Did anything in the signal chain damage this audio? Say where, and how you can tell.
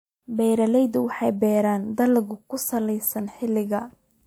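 No, nothing in the chain audibly damaged this speech.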